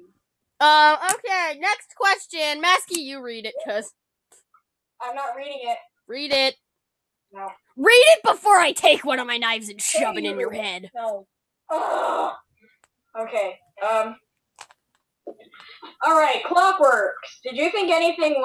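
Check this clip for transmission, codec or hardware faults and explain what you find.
One hardware fault stands out. From 6.28 to 6.36 s, loose connector crackle: a worn contact makes and breaks, chopping the signal into irregular scratchy bursts, seen as jagged waveform spikes and vertical broadband streaks on a spectrogram.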